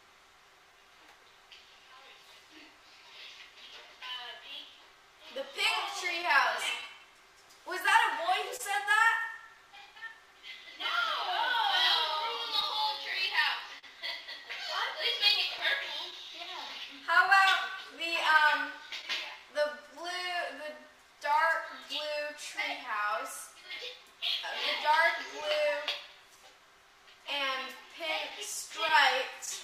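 Across the whole clip, clock drift between sender and receiver is at work. The sender's clock runs about 1.5% slow relative to the receiver, so the jitter buffer keeps draining rather than overfilling. Unlike packet loss, this is a steady, one-directional pressure that never lets up.

From 0.72 s to 27.86 s, repeated timing corrections answer that drift. The receiver stretches the sound by repeating tiny pieces, playing at roughly 99% speed and adding around a third of a second overall. Where they are heard at all, they come across as faint hiccups and a slightly unsteady tempo, always lengthening, never cutting.

Scattered short gaps appear between 6.22 s and 8.61 s: about three small holes, the longest only a few tens of milliseconds, each patched by continuing the preceding sound. Unlike the timing corrections, these come from lost or late packets and leave brief ticks or smears, not a tempo wobble. 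A similar cluster of about three gaps follows from 12.60 s to 13.85 s, slightly longer, reaching roughly 40 ms.

At 15.58 s, chunks out of order produce a jumbled instant. A 5.33 ms chunk plays one slot late, after the chunk that should follow it, so nothing is missing, but there are three hard joins. That sets it apart from the concealed gaps, which patch holes rather than reorder the audio.

From 16.11 s to 19.05 s, around five more scattered short gaps occur, each very short, around 15 ms at most. A final group of about three tiny gaps, around 10 ms at most, falls between 28.30 s and 29.49 s.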